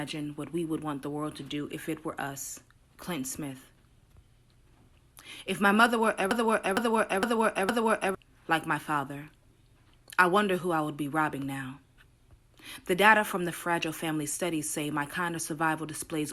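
From 6.31 s to 8.15 s the audio falls into a broken-record loop: a fragment of about 0.46 s repeats exactly four times back to back, and the material due there is lost. On a spectrogram, four identical blocks sit side by side. The likely cause is a stalled player, encoder or stream.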